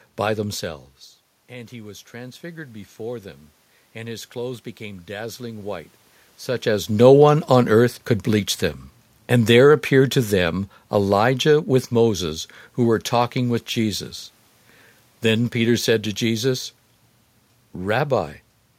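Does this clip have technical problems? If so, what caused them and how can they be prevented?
Yes. There are two automatic gain faults.

Automatic gain rising: After "by themselves", the input level drops by about 16 dB. From 1.48 to 3.33 s the automatic gain control slowly raises its gain by about 4 dB. The voice and the room noise swell up together. To prevent this, turn off automatic gain and set a fixed input level.

Automatic gain falling: After "earth could bleach them", the input is too loud, or its background noise too strong, for the gain control. From 9.31 to 12.23 s it lowers its gain by about 3 dB. The voice starts loud, then sinks along with the room noise. To prevent this, disable automatic gain and set the fixed gain to leave headroom.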